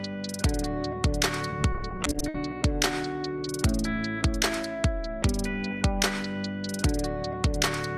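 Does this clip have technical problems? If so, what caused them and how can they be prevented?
Yes. From 1.50 to 2.35 s there is repeated packet loss, heard as robotic sound: about fifteen brief holes, the longest 60 ms, each patched by stretching the preceding sound. Roughly a quarter of that stretch is filled-in guesswork. Unlike one isolated dropout, the gaps recur rapidly, producing a choppy, stuttering texture. A larger jitter buffer, forward error correction, or a steadier network link would prevent it.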